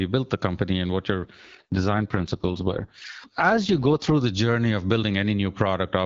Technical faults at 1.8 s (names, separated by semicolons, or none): AMR rate drop